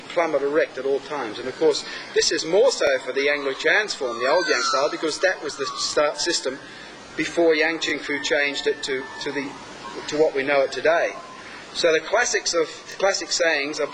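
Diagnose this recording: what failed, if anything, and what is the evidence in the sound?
Overlapping chunks, at the buffer or chunked-processing stage. Brief stutters land at 2.87–2.90 s, 7.90–7.92 s and 12.92–12.94 s, about 5.02 s apart. Each new 5-second chunk starts 23 ms early, so that 23 ms slice plays twice at every join.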